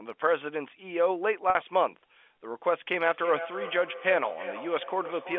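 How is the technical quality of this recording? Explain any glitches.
Two faults stand out in this telephone-band speech, which carries G.711 coding and limited bandwidth.

From 1.5 to 1.55 s there is packet loss with pitch repetition. A 50 ms gap, which fits five 10 ms packets, was bridged by repeating the last pitch period. It comes across as a brief, slightly held, buzzy tone before normal speech resumes.

From 3.06 s to the end, feedback echo between two devices appears. A second device in the room replays the far microphone's signal, and that microphone picks it up again outside the reach of the echo canceller. Speech recurs roughly every 0.3 s, at its loudest about 11 dB below the original, sounding thin and ringing.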